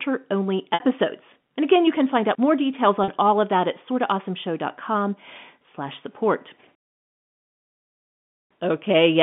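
Packet loss with pitch repetition occurs twice on this telephone-band line: about 60 ms lost at 0.74 s and about 40 ms at 3.04 s, between "find out more details" and "all of that at". The receiver repeats the last pitch period, briefly holding a buzzy tone.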